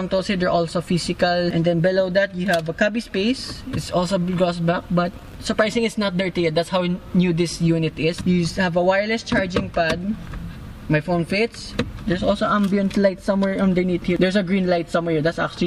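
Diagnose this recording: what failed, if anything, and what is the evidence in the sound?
Nothing failed; no faults heard.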